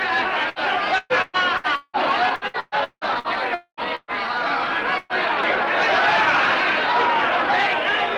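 At 0.49 s a burst of packet loss drops about 60 ms; the receiver extends the last sound briefly and playback skips ahead. From 0.98 to 1.96 s and again from 2.35 to 3.27 s, repeated packet loss (robotic sound) sets in: four, then five gaps, the longest near 180 ms, patched by repetition over roughly half of each span, giving a choppy texture. At 3.54 to 3.80 s the audio stretches into a fading tail and then about 100 ms of silence, most likely a long network dropout. Further bursts of packet loss at 3.95 to 4.11 s and 4.98 to 5.13 s each lose about 120 ms; the first fades to brief silence before resuming.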